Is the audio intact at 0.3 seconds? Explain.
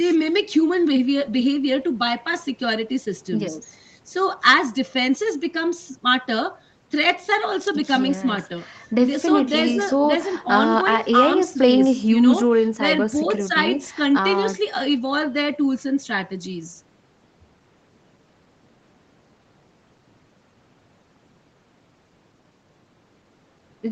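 Yes, the speech at 0.3 seconds is intact, with no fault at that moment.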